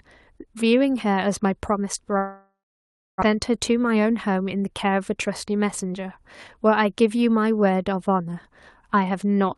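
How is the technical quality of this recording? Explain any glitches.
There is one clear glitch in the speech: a gap lasting a little over a second, from 2.17 s to 3.29 s. The call codec path stays active throughout, with the high end capped at around 12 kHz.

From 2.17 s, the sound does not stop cleanly. The last moment is stretched into a fading buzzy hiss, and then roughly 0.6 s of near-silence follows before the speech returns at 3.29 s. This is likely a long network dropout. Packets stopped arriving, the receiver concealed the gap by extending what it had, and about 1 s of the original speech was lost.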